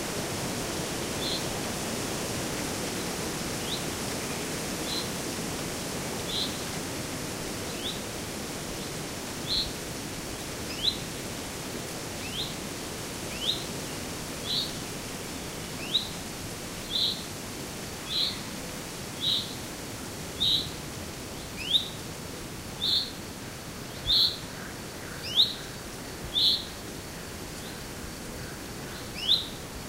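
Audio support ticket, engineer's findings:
No technical faults found.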